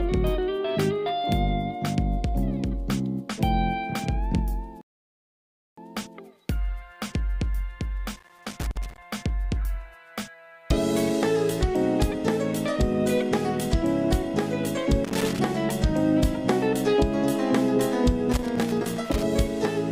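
At 4.81 s a rebuffering stall drops the audio to silence until 5.78 s, adding about 0.96 s before playback resumes exactly where it stopped. Loose connector crackle follows at 8.16–9.02 s, 15.05–15.39 s and 18.32–19.23 s: an intermittent contact chops the signal into irregular bursts of scratchy crackle.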